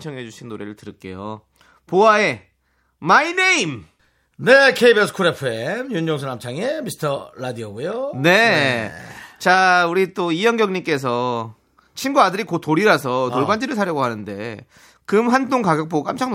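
No audible technical faults.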